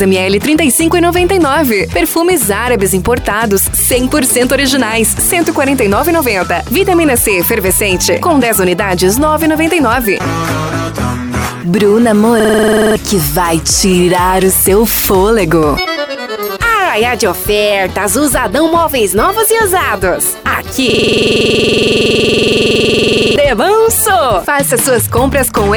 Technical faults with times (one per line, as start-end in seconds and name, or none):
12.40-12.96 system hang loop
20.90-23.36 system hang loop